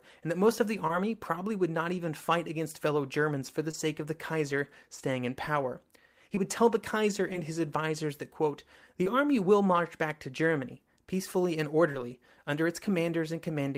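Speech with short concealed packet loss at 0.87, 3.71 (between "for the" and "of the"), 6.35, 7.33 (before "his advisers that quote"), 9.04 and 11.92 s (after "peacefully and"). Each time about 20 ms never arrived and was patched from preceding sound, heard as a brief smear rather than the hard silence of an unconcealed dropout.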